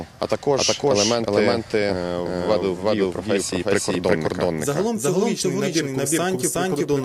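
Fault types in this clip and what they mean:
Doubled audio track: an equally loud full-band copy trails about 0.4 s behind throughout, likely from a second capture path; spectrogram and waveform repeat every event.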